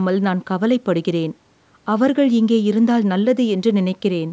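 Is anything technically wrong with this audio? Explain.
No, nothing is technically wrong.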